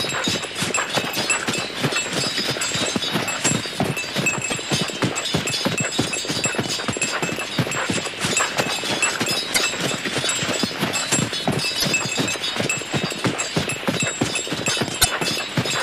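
Damaged data in a compressed stream corrupts five short stretches, so the decoder misreads frames and loses sync, producing brief chirps or squawks in the sound at 1.11–1.17, 4.51–4.54, 9.50–9.58, 11.80–11.84 and 14.98–15.06 s, each lasting roughly 30 to 80 ms.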